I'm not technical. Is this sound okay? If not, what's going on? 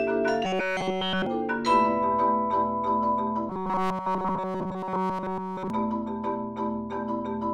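No. What happened here is likely robotic sound from repeated short buffers: fresh audio stopped arriving in time, so the playback filled the gaps by looping a tiny slice over and over, skipping the real sound. That happens from 0.45 to 1.26 s and again from 3.49 to 5.70 s. Those stretches are entirely repeats. The looping stamps a fixed buzz at 188 Hz onto the sound, giving it a stiff, metallic, robot-like tone.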